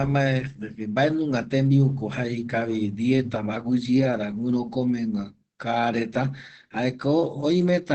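Opus voice compression runs throughout. Nothing passes 8.4 kHz. Coarse SILK coding leaves the speech plainly muffled and hoarse, which fits about 12 kbps.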